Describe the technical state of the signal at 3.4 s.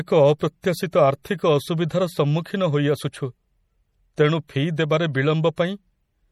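At 3.4 s the speech carries MP3 compression damage that runs through the whole clip. Nothing is present above 17.7 kHz, and weak spectral detail flickers between frames, giving a watery, swirly quality that fits a likely low MP3 bitrate around 48 kbps.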